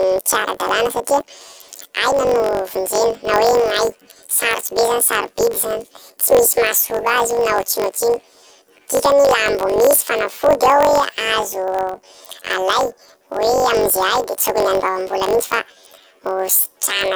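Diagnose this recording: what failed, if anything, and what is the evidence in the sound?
The fault is at sample-format conversion: planar audio read as interleaved. Throughout the clip, the speech sits an octave high with a flutter at about 47 Hz. Each block plays twice at double speed, left half then right. The 21.33 ms repeat fits a 1024-sample block.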